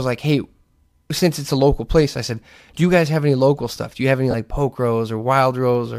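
From 4.31 to 4.35 s, just after "you have any", there is a burst of lost LE Audio frames. About 30 ms of audio is missing, which fits three 10 ms frames. The decoder fills the gap with the last good spectrum, flipping its signs at random. That keeps the energy but scrambles the phase. The result is a brief noisy smear where the speech should be. The light, grainy texture elsewhere likely comes from LC3 compression.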